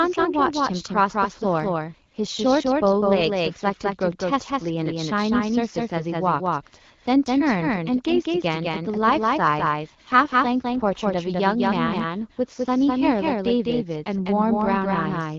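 A second copy of the speech is likely being captured through a slower path, so the doubled audio track runs through the whole clip. The copy trails the original by around a fifth of a second at roughly the same level. It has no decay or room colouring, so every syllable returns as a sharp, full-band repeat rather than a reverberant tail.

From 1.86 to 3.24 s, and again from 9.01 to 11.01 s, the network appears to order the AMR-WB codec down to a lower rate to free bits for error protection. This is an AMR rate drop, and the change in sound fits a step from 12.65 to 8.85 kbit/s. The bandwidth stays the same and nothing drops out, but the speech turns rougher and more synthetic. It returns to the lightly coded HD Voice quality when the rate recovers.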